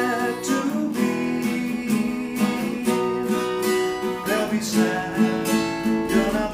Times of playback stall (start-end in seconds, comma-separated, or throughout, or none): none